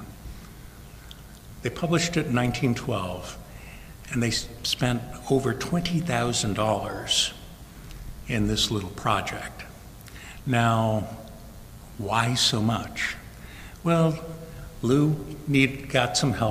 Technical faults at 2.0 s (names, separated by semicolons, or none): DECT cordless phone buzz